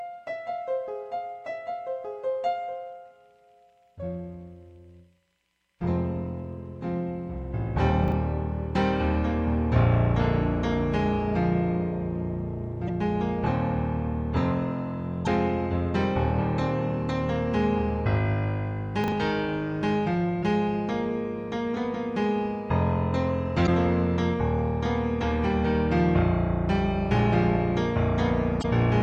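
Everyday sound recording with two kinds of trouble. At 8.04–8.12 s and again at 19.04–19.12 s there are chunks out of order: a 40 ms block lands one chunk late, after the one that should follow it. Nothing's missing, but the swap gives a brief jumbled stutter at the hard joins. Separately, damaged data in the compressed stream produces short glitches at 12.84–12.90 s, 15.24–15.27 s, 20.39–20.44 s, 23.63–23.69 s and 28.59–28.65 s. The decoder hits bad frames, loses sync and skips ahead to the next good one.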